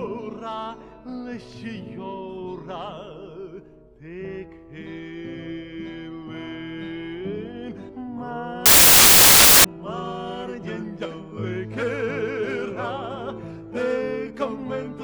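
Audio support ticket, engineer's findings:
Loud broadband noise burst 8.66 to 9.64 s, about 1 s. Samples built from the wrong bytes: decoder/reader misaligned or byte-swapped, so fast-changing low bits become the most significant part of each value.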